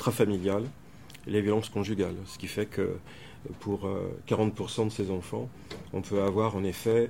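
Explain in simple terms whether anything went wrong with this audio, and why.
A steady ticking runs through the sound. From about 0.52 s to 6.91 s there is a click roughly every 0.64 s, about ten in all. The likely cause is clock drift buffer slips. Two devices were each keeping time by their own clock, and one ran slightly fast. Audio waiting between them slowly piled up or ran short. Each time, a handful of samples got dropped or repeated, and that jump makes the click.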